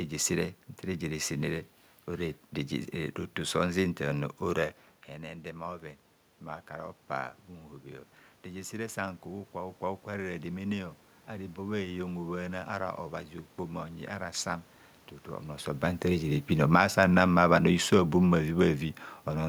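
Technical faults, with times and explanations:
16.51 to 19.44 s, automatic gain falling: the level eases down by about 4 dB, and the room noise sinks right along with the speech. That's the gain control backing off after judging the input too hot or its background noise too strong, not the talker moving.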